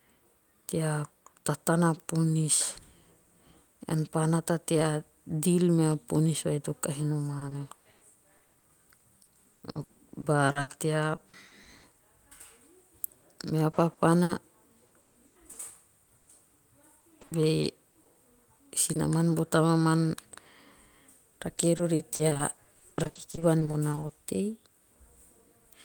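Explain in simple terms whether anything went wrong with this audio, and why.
Repeated packet loss (robotic sound) hits four stretches: 7.39–11.85 s right after "ponis vai to kahi", 13.71–16.29 s, 17.01–18.97 s just before "bo tamaman", and 21.77–24.11 s. Chunks of the speech kept going missing, up to 140 ms at a time, and each hole got patched by stretching the previous sound. That's what makes it choppy.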